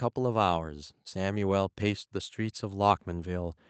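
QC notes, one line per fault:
0.15–3.62 s, automatic gain rising: the voice and background swell together by about 6 dB because the gain control found the input too quiet and slowly raised it.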